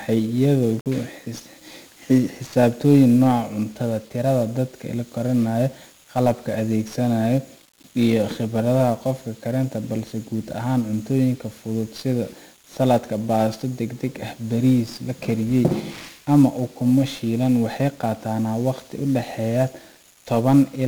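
From the start, the whole recording carries 1-bit DFPWM compression, and the damage is heavy. Each sample is reduced to a single up-or-down step that nudges an adaptive level, so the speech comes through fuzzy and crackly, with the upper frequencies smothered under hiss. The graininess fits a stream of roughly 48 kbps. On a spectrogram, a dense broadband noise floor fills the treble. The waveform looks jagged and stair-stepped rather than smooth.

At 0.80 s an intermittent contact briefly breaks the signal path, as a loose plug or cable would. The line stays open for about 47 ms, ending by 0.86 s. The speech drops out, with a crackle as the connection opens and again as it closes. On a waveform this shows as a short near-flat gap bracketed by sharp spikes. A spectrogram shows a thin vertical band of missing energy with bright broadband clicks at each edge.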